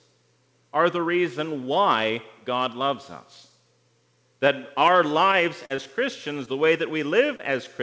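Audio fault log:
5.66–5.72 s and 5.76–5.80 s, short concealed packet loss: about 40 ms then 20 ms never arrived. The decoder extrapolated the preceding sound, giving two brief smears close together.
6.00–6.65 s, jitter buffer slow-down: the receiver repeated pitch periods to rebuild its reserve, adding 38 ms. The audio plays at about 95% speed without a pitch change.
6.45–6.49 s, short concealed packet loss: a 20 ms gap within the slowed passage was filled by continuing the last sound, producing a short wobble.
7.27 s, short stall from a late packet: the buffer ran dry and held the last sound for 20 ms until the packet arrived. Nothing is lost, but the sound lingers briefly.
7.37–7.41 s, short concealed packet loss: a 20 ms packet was missing and was synthesised from the preceding audio. It is heard as a small smear.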